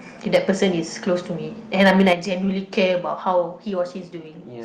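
From 0.34 to 0.51 s, the loudest syllables crackle harshly, with their peaks flattened. This is microphone overload, likely from input gain set about 5 dB too high for the converter. A small share of samples are cut off.

From 1.80 to 2.13 s it happens again and sounds worse. The peaks run about 8 dB over the limit, and a few percent of samples are clipped.

At 2.13 s, voice and background drop together by about 7 dB in one step. This microphone volume stepped down likely comes from the call software reacting to the clipping peak just before.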